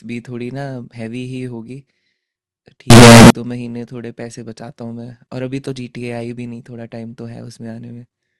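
From 2.90 to 3.30 s the speech turns into a blast of very loud, harsh distortion, likely from signed and unsigned samples being mixed up. Unlike clipping, even the quiet moments roar.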